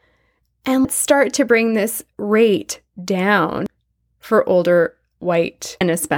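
At 0.82 to 0.85 s, 3.66 s and 5.81 to 5.84 s the speech is broken by brief chirps and blips from damaged data in the compressed stream. The decoder misreads the corrupted frames, loses sync and hunts for the next valid frame header.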